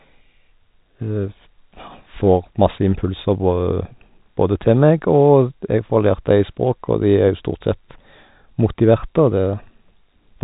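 No technical faults can be heard in this speech recording. It comes through a G.711 telephone coding path, with nothing above 3.8 kHz, so it has the narrow, band-limited sound of an ordinary fixed-line call.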